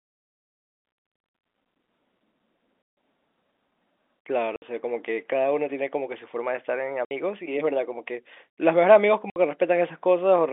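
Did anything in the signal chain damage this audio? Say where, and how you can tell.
Yes. At the network, packet loss filled with silence cuts hard-edged holes at 2.82–2.97 s (150 ms), then 4.56, 7.05 and 9.3 s (60 ms each). These are multiples of 30 ms packets, unlike a noise gate's ramped fades, and the G.711 telephone coding itself adds no damage beyond its usual band limit.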